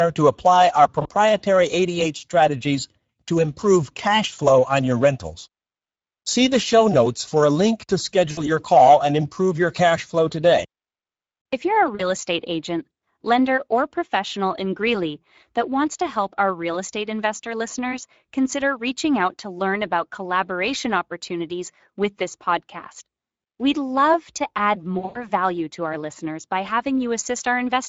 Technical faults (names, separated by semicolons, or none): Speex codec; VoIP packet loss concealed by the speech codec